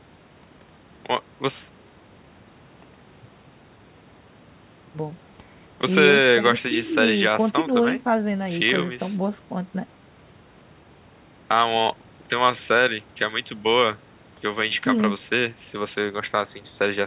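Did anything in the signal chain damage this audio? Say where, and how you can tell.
No, nothing in the chain stood out as damaging this speech on listening, with the band stopping around 4 kHz as a call codec path would leave it.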